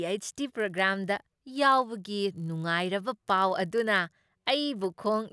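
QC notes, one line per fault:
Throughout: resampler restarted on every block. There's a 50 Hz buzz riding under the speech, and it drops out in the pauses. Each 20 ms block seems to be converted on its own, likely a 48 kHz to 24 kHz step, so every block edge gets a small error.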